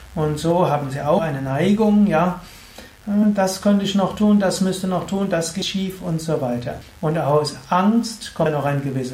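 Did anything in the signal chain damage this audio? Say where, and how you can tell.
Yes. Mains buzz enters at the analogue wiring stage. A steady, raspy buzz runs through the whole clip at about 30 dB below the sound. It is built on 50 Hz harmonics reaching into the kHz range. Switching spikes from a dimmer, rectifier or poor shielding cause this.

Compressed frames skipped point to the codec or storage stage. The sound jumps forward at 1.17, 3.22, 5.61, 6.80 and 8.45 s. It loses roughly 150, 40, 100, 200 and 100 ms. Each loss is a multiple of a 21.3 ms frame.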